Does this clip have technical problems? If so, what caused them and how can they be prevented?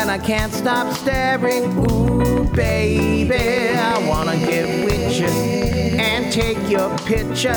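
Yes. Likely interference or a faulty connection injects a train of clicks from 1.85 to 5.94 s: about twenty similar pops, irregularly spaced near 4.4 per second, well above the sound. Moving nearby equipment away from the signal chain and checking the interface connections would prevent it.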